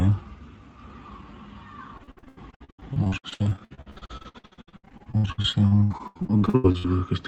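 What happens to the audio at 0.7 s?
Nothing goes wrong at 0.7 s: the sound passes through the call path intact, with only the band-limited, coded character that an Opus call at around 32 kbps gives throughout.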